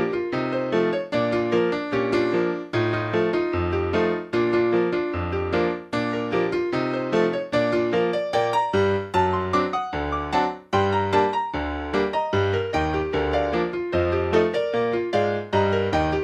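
No technical faults can be heard anywhere in the audio. There is nothing that calls for a time or a cause.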